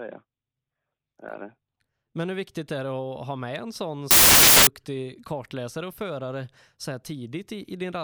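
At about 4.11 s the speech suddenly turns into a burst of loud, harsh broadband noise that lasts until roughly 4.67 s, a bit over half a second. That's samples built from the wrong bytes: the reader lost its byte alignment or flipped the byte order, so the rapidly changing low bits ended up as the big part of each value.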